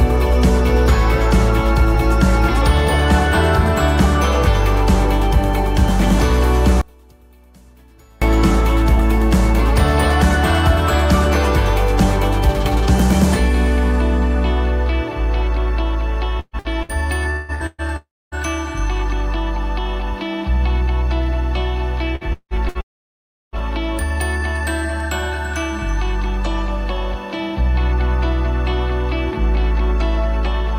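From 6.81 to 8.22 s, one stereo channel has likely been inverted in polarity, so the shared centre content cancels when the two channels combine in mono. The level falls by about 32 dB, leaving only a faint residue of the channel difference.

Between 16.40 and 17.81 s, repeated packet loss strikes six times, removing about 600 ms of audio, with the longest gap 0.18 s. The receiver patches each hole by extending the last fragment, so about 43% of the stretch is filled-in sound, choppy and robotic. A long network dropout is the likely cause of what follows at 17.96 to 18.35 s. About 0.36 s never arrives, and a continuation of about 0.35 s fades into roughly 0.26 s of silence before the audio resumes without the lost portion.

The same pattern returns later. From 22.16 to 22.78 s, four packet-loss gaps remove about 300 ms, the longest 0.18 s. Concealment fills 47% of the span, giving the same choppy, broken texture. 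Immediately after, from 22.81 to 23.56 s, about 0.72 s is missing, and after a fading fill of about 0.72 s almost all of it, about 0.69 s, plays as silence.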